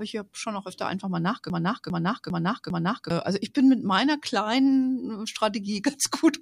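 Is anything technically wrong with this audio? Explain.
Yes. After "auch öfter einfach mal", from 1.5 to 3.1 s, a broken-record loop repeats one 0.40 s fragment four times. A stalled stream is the likely cause.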